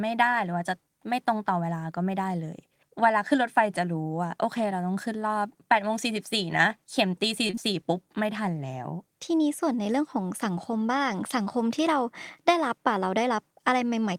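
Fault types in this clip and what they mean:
short concealed packet loss: a brief smeared wobble from 7.47 to 7.59 s, where three back-to-back 20 ms gaps were patched by extending the preceding sound.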